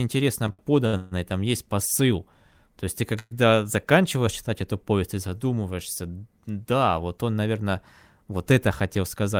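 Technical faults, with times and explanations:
0.47–1.14 s, repeated stalls (stutter): packets kept reaching the receiver later than they were due, so its jitter buffer ran dry four times in under a second. Each time it stretched the last sound to bridge the wait, about 277 ms in all, with the longest hold 140 ms, so roughly 42% of this stretch is patched-in continuation. Nothing is lost, but the speech drags and judders just before "там есть посыл".
3.19–3.34 s, call audio freeze: the jitter buffer emptied once, likely because packets were held up in transit. The receiver extended the last sound for about 117 ms, letting it fade until the final 20 ms or so were silent. When the packets arrived, playback resumed where it had stopped, so a brief hitch sits between "есть ты" and "заканчиваешь читать эту повесть", and everything after it runs 117 ms later, with nothing missing.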